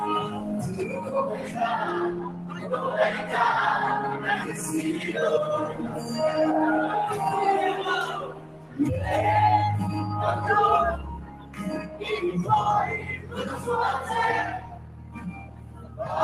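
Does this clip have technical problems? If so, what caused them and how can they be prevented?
Yes. A noise suppressor designed for speech was applied to music or sounds and left running throughout. It treats steady tones, ambience and decay tails as noise, so the level swings by around 15 dB as it engages and releases. Onsets pass largely intact while sustained material sinks, giving a pumping, thinned character. Prevention: bypass speech noise suppression, or switch the chain to a music mode, whenever the source is not speech.

The sound was cut by the noise suppressor in eight places: 0.27–1.57 s, 2.14–2.73 s, 4.46–5.08 s, 5.71–6.12 s, 8.24–8.79 s, 11.25–12.02 s, 12.99–13.67 s and 14.58–16.05 s. In each, the steadier or decaying content was classified as noise and pulled down by about 6 to 9 dB at its deepest. Prevention: disable the suppressor, or raise its threshold so held material is not misread as noise.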